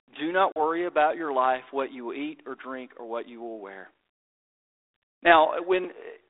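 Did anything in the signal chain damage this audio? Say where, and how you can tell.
Yes: a hard-edged silent hole at 0.52 to 0.62 s, after "do not" and before "about your life what", with speech returning slightly distorted. This is packet loss on an ADPCM call: about two packets (40 ms) dropped on the network, throwing the decoder's predictor off briefly.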